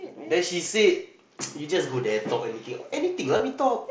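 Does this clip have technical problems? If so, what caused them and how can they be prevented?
Yes. At 3.37 to 3.40 s, concealed Bluetooth headset packet loss: about 22 ms of headset packets failed to arrive, fitting roughly three lost frames. The receiver filled the gap by repeating recent waveform, giving a brief buzzy tone at full level, then a slight warble as speech resumes. The working mSBC headset codec caps the audio at 8 kHz with faint graininess. Keeping the headset close to the phone, with a clear path and less nearby 2.4 GHz interference, prevents these dropouts.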